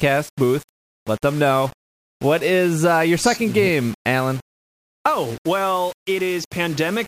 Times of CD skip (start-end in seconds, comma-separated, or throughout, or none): none